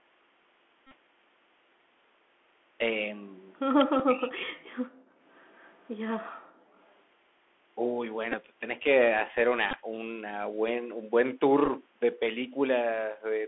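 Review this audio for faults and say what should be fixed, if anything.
Bluetooth CVSD headset codec, throughout: the speech is confined to roughly 250 Hz to 3.4 kHz, which fits 64 kbps CVSD. Its one-bit slope tracking audibly roughens sibilants and leaves a granular hiss.

Bluetooth headset packet repeated, at 0.87–0.94 s, 3.99–4.01 s, 8.32–8.35 s, 9.71–9.74 s and 11.66–11.70 s: lost headset packets were replaced by replaying earlier ones. This gives a buzz near 267 Hz during each run of repeats, longest at the first.

Speech suppressed in double talk, 3.84–4.8 s: the speech dips sharply, by around 40 dB at worst, likely because the echo canceller ducked the near talker while the far side was also speaking.

Background gated by the echo canceller, 5.08–5.2 s and 6.36–6.74 s: the room sound drops by about 26 dB and then about 37 dB, as the canceller clamps the microphone during loudspeaker playback.

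Echo leak, 5.49–5.89 s and about 6.9 s: a faint delayed copy of the speech returns 203 ms later, at about 35 and 40 dB below it, likely from imperfect cancellation of a loudspeaker path.

To prevent these, use a wideband headset link with good radio conditions, or a wired microphone, and have the far end use a headset instead of a loudspeaker.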